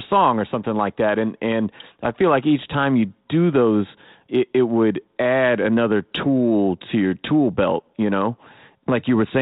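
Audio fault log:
Nothing to log here: the speech comes through a 32 kbit/s G.726 ADPCM link, which adds only a light coding roughness, and there are no faults anywhere in it.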